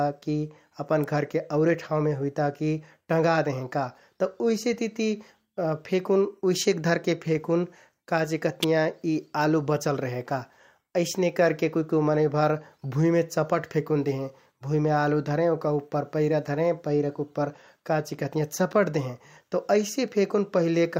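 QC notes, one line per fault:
1.04 s and 8.63 s: electrical switching spike. A sharp, fairly loud snap, peaking around -10 dBFS, sits on top of the speech each time without disturbing it. This is likely a nearby switch or motor arcing briefly and being picked up by the audio line.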